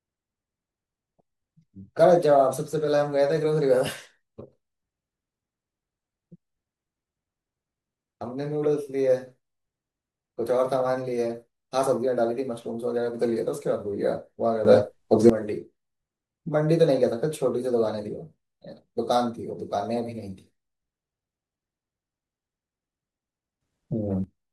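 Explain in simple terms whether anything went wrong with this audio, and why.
Twice, the speech suddenly gets much louder: from 14.65 to 15.30 s, and again from 23.61 to 24.24 s. This is a sudden gain jump. The voice and the background noise leap up together. A volume setting was likely changed instantly, with no smooth fade.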